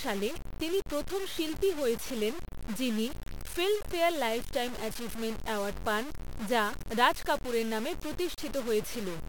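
From start to finish the speech carries a coarse, grainy distortion that rises and falls with the signal, which points to low bit depth without dither, likely a reduction to around 5 bits with plain truncation. Because the rounding error tracks the waveform instead of forming a steady hiss, softer syllables and decaying tails turn gritty and sputter between steps, and the quietest moments collapse to silence. The error sits only about 10 dB below the speech.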